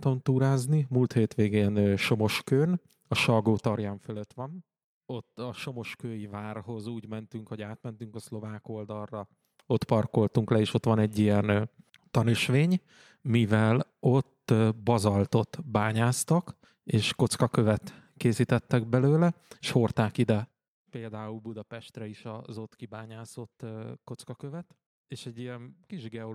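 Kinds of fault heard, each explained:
zipper noise: the speech level moves in unsmoothed 1 dB steps, twenty to thirty a second, during three changes of about 15 dB at 3.5, 9.1 and 20.3 s, so ticking rides on it. The waveform envelope forms a staircase, the spectrogram shows faint vertical lines.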